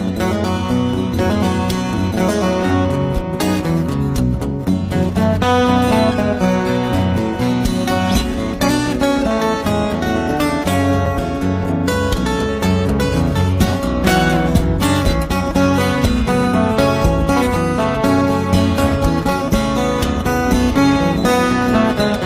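Gaps between stream segments occur at 11.06 s and again at 15.06 s, four seconds apart, which matches the length of the stream's segments. At each boundary the time stamps of neighbouring segments fail to meet, leaving a hole the player fills with silence, about 5 ms the first time and about 4 ms the second. Each sounds like a brief, hard-edged dropout or tick in the audio, yet nothing is lost; the sound simply resumes slightly later.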